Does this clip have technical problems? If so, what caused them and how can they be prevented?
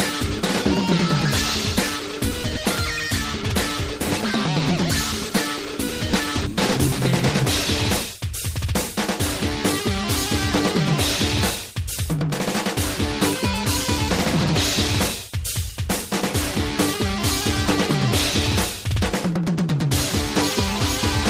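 Yes. At about 6.13 s there is a skip ahead: roughly a second of audio is missing, and the two sides are joined almost directly with no fill. Later audio was already queued when that stretch was discarded. Sizing the jitter buffer to absorb bursts prevents this.

From 8.07 to 8.73 s a jitter buffer speed-up runs the audio at about 107% with pitch unchanged, trimming around 50 ms in short pitch-period pieces to reduce excess buffered delay. Steadier packet delivery and gentler buffer adaptation prevent it.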